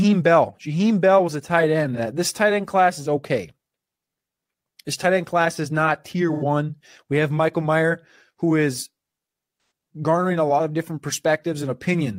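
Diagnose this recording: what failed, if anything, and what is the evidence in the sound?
AAC frame loss with concealment in the codec: concealed patches at 1.93, 6.32 and 9.54 s, lasting 43, 85 and 171 ms, refilled from the last good spectrum.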